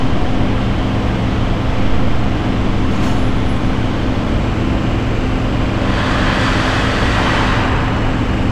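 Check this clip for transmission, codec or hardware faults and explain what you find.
I found no faults to report in this clip.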